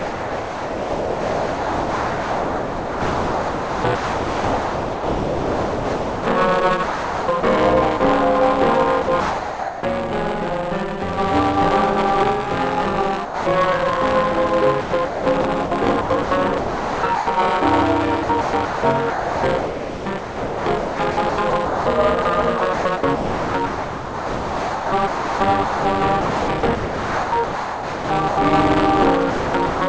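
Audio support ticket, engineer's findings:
Buffer tearing, throughout. Steady robotic buzz near 188 Hz, present only while sound is playing, which fits a 256-sample buffer. Writer and hardware reader slipped, so about a fifth of each period replays audio roughly 20 ms stale, with hard joins.

Sound chopped by the voice detector, 0–6.26 s, 6.83–7.43 s, 9.02–9.83 s, 14.81–17.27 s, 18.23–28.37 s, 29.30–29.81 s. Choppy sound with repeated holes. Likely sender VAD toggling repeatedly, with comfort noise filling the gaps.

Sound dropped by the voice detector, 7.97–8.00 s (30 ms) and 13.25–13.46 s (210 ms). Sound gives way to steady comfort noise, then returns. Likely sender VAD judging quiet material as background and halting transmission. G.722 path band-limited to 8 kHz.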